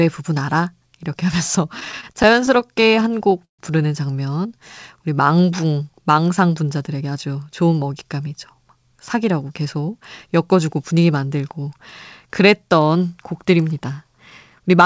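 Speech over a call line with nothing above 8 kHz, which fits G.722. From 1.80 to 3.61 s there are repeated stalls (stutter): the jitter buffer keeps running dry, and about 24 gaps get filled by stretching the last sound, the longest about 137 ms. Then from 6.76 to 7.36 s a jitter buffer speed-up kicks in, trimming pitch periods so the speech runs at about 114% with the pitch unchanged, dropping roughly a tenth of a second.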